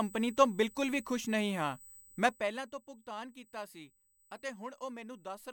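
A speech recording carries two faults. Throughout, current drawn by a USB bus in its 125-microsecond microframes is leaking into the audio path through the power or ground, so a fixed-pitch USB whine sits under the speech. Its fundamental is 8 kHz, but the strongest component is the harmonic at 16 kHz, roughly 25 dB below the speech, heard as a thin, steady high squeal that never changes pitch. From 2.19 to 2.70 s, a level reduction of around 15 dB is applied in discrete jumps rather than as a continuous ramp, at a rate of a couple of hundred steps per second. That is zipper noise: each unsmoothed jump leaves a tiny discontinuity, and together they form a fine buzzy ticking laid over the speech while the level falls, even though the drop itself is heard as a fader-like move.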